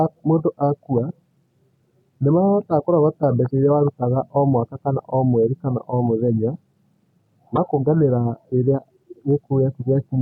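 At 7.53 s to 7.58 s the speech is broken by a short glitch lasting about 50 ms, caused by damaged data in the compressed stream: corrupted bytes left the decoder unable to read those frames, so it lost sync until the next valid frame header.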